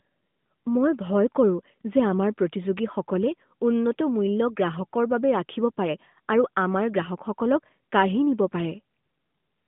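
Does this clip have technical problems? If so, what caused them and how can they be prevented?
No, there is nothing to fix or prevent: the speech is carried over an AMR narrowband mobile codec at 12.2 kbps, which explains the 150 Hz to 3.6 kHz band and is normal for a mobile call path.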